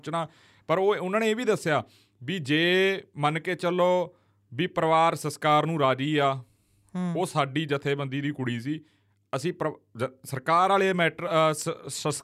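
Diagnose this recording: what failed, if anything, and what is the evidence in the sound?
Nothing failed; no stage from capture through playback leaves any audible trace on the speech.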